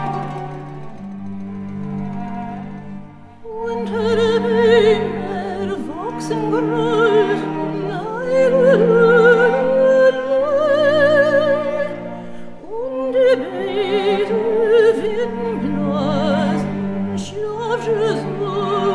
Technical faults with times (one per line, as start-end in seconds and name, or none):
none